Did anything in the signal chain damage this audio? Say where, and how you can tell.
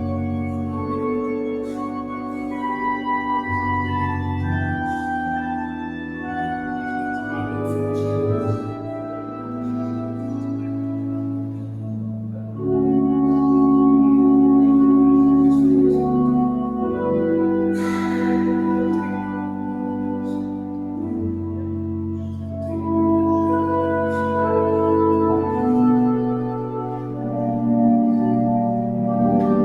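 Yes. Sustained parts of the sound sag and swell by about 5 dB throughout, while attacks come through intact and tails thin out. That points to call processing: a noise suppressor meant for speech mistook held tones and ambience for noise and kept ducking them.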